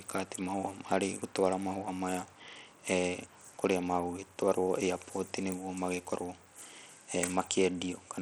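Speech throughout, with plainly audible Bluetooth SBC compression, likely from a starved bit pool fitting about 80 kbps: treble flickers out and gritty grain rides the sound, unlike the swirly, watery artefacts of MP3-style codecs.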